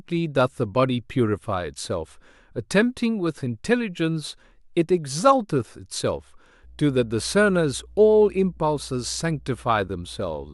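Mains hum enters at 6.6 s and runs to the end: a ground loop or nearby transformer couples the 60 Hz power line in, a steady low drone roughly 25 dB below the speech.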